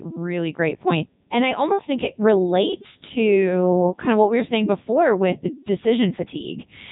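Speech run through a Codec 2 vocoder from start to finish, and the damage is heavy. The whole clip has that robotic, buzzy quality: the decoder isn't passing the waveform along, it rebuilds the sound from sine waves using only pitch, voicing, energy and a rough spectral envelope. The character points to the top 3.2 kbit/s mode. Nothing survives above about 3.8 kHz, so the band is narrow throughout.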